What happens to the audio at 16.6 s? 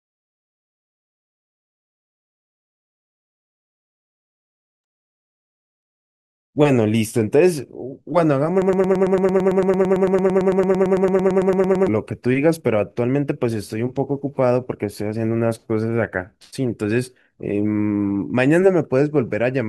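Nothing goes wrong at 16.6 s; the speech carries on intact through that moment, with no dropout, glitch or other fault.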